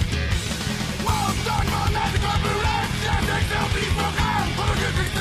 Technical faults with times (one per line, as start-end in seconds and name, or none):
1.97-5.20 adaptive stream at a lower bitrate